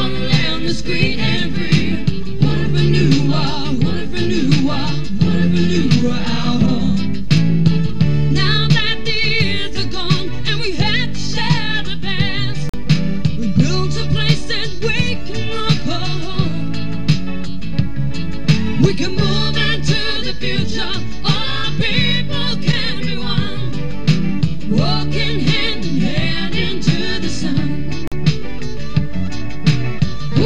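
The audio cuts out twice for about 43 ms, at 12.69 s and 28.08 s. These are blocks of digital silence, which fit a 2048-sample buffer left unfilled.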